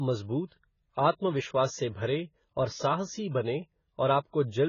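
AAC compression damage runs through the whole speech clip: nothing sounds above about 7 kHz, and the audio is dull and smeared, with a warbling, fizzy edge on sibilants. The likely cause is AAC-LC coding at a low bitrate, which fits something near 16 kbps.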